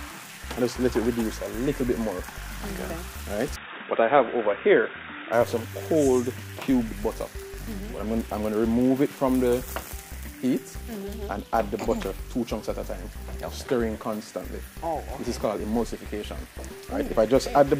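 From 3.56 s to 5.33 s, the input most likely switched to a poorer device, with the recording picked up by a narrower-band microphone or a headset's call profile for that stretch. Everything above about 3.8 kHz disappears, so the sound turns dull and boxy, and a faint new background noise sits far below the signal. There is no gap at either switch and the level barely changes, so the tone simply drops and then clears again.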